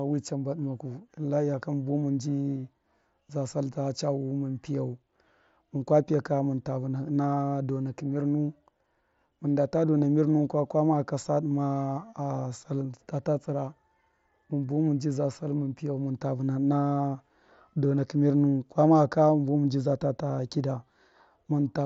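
No technical faults can be heard in this speech recording. It comes through a Bluetooth mSBC headset link, so the sound stops at about 8 kHz and carries a light graininess on louder passages, with weak upper bands coming and going.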